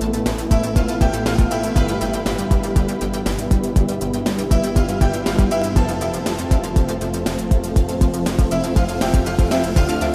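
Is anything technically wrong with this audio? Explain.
Yes. From 0.47 to 9.49 s, regular clicks recur about every 1.29 s: clock drift buffer slips, likely from a clock mismatch of roughly 300 ppm dropping or repeating around 15 samples each time.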